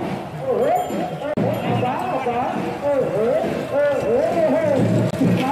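At 1.34 s there's a CD skip: the laser jumped to a different turn of the disc's spiral, so the player mutes for about 30 ms, up to 1.37 s, then picks up from a different spot rather than where it left off.

Near the end, from 5.11 to 5.14 s, the sound cuts out for 23.2 ms and then comes back as if it had kept playing underneath. That's likely a Bluetooth dropout, where audio didn't reach the headphones in time and got discarded. A gap that short points to a single lost frame.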